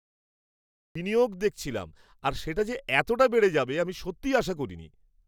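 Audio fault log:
0.00–0.95 s, cut-off start: the clip opens on digital silence, and at 0.95 s the speech enters abruptly, already partway through a sound, just before "বিনিয়োগ দেখছিলাম আর সেটা". There is no natural onset or build-up to the level, so the first syllable sounds chopped rather than spoken. This is what happens when capture or streaming begins after the talker has already started, keeping only the tail of that sound.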